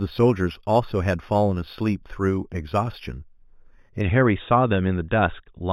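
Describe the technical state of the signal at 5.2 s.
At 5.2 s the signal is intact, with no audible fault at that point.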